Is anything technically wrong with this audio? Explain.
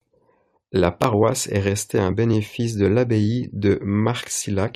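No, nothing technically wrong turns up anywhere in this speech recording.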